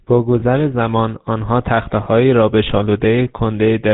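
A speech clip carrying the GSM full-rate codec throughout. The voice is buzzy and gravelly, and nothing above 4 kHz comes through. The codec rebuilds the vocal tract from a sparse pulse excitation, and the damage is plainly audible. It fits a 13 kbps stream. Lost GSM frames occur at 0.40 to 0.43 s and 2.04 to 2.07 s. Each is a brief metallic ring where the previous frame's settings were repeated. Each points to a single missing 20 ms frame.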